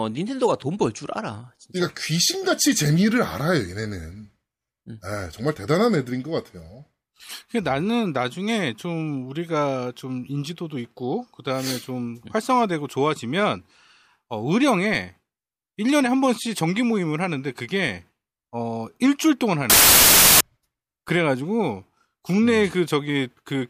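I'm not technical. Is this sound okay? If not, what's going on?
No. From 19.70 to 20.41 seconds, the speech is replaced by a harsh burst of loud hiss, like static. This is a case of samples built from the wrong bytes. Each tiny piece of digital sound is stored as a few bytes. Here the player put them together wrongly. The small, jittery detail became the loud part, so the sound turned into noise.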